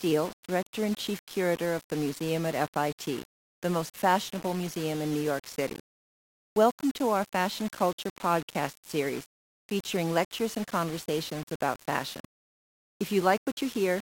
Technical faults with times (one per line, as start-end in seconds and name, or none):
0.00-14.15 low bit depth without dither